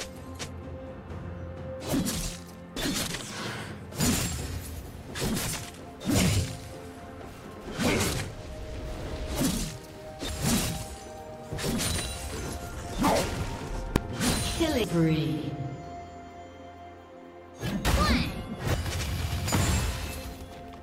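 At 2.77 s and again at 10.29 s there is damaged data in a compressed stream. Bytes in the encoded stream were corrupted, so the decoder misreads those frames, loses sync and hunts for the next valid header. Each event is a brief chirp, squawk, click or short hole. On a spectrogram it shows as a thin vertical smear of scattered broadband energy. In the waveform the shape breaks discontinuously where playback resumes.

At 13.96 s there is a single bang from invalid numbers at full scale. A calculation produced infinite or invalid values, and these were pinned to the maximum sample value for about 1.45 ms, which fits a 64-sample block. Because the block is so short, the pop at its start and the pop at its end merge into one loud crack. The waveform shows a tiny flat slab sitting far beyond the audio's peaks. The spectrogram shows a sharp full-height vertical line.

The same compressed-stream damage returns at 14.84 s and 18.74 s. 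Each is another short glitch, and each looks like the earlier smears.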